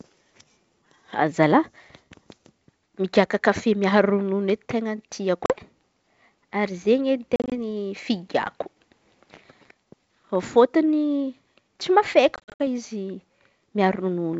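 At 5.46 s, 7.36 s and 12.36 s, packet loss on an ADPCM call cuts the G.722 stream. Hard-edged silences replace about 40, 100 and 160 ms of sound. The decoder's predictor then falls out of step with the sender's, so each return is slightly distorted briefly.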